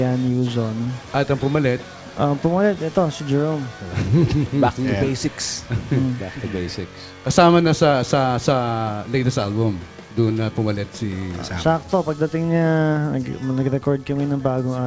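No technical faults can be heard anywhere in the clip. It has passed through a call path, and the lack of any content above 8 kHz fits a wideband call codec such as G.722.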